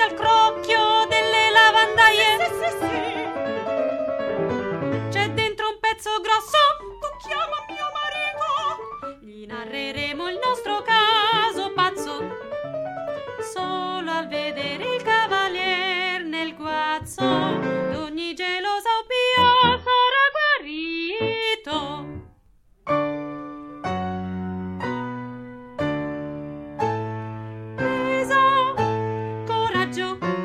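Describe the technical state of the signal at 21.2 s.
At 21.2 s the adaptive stream is at a lower bitrate, from 19.42 to 21.42 s. A slowed connection forced a cheaper encoding. Nothing above 5.8 kHz survives, which fits a drop to 24 kbit/s MP3. Quality changes abruptly, without any gap.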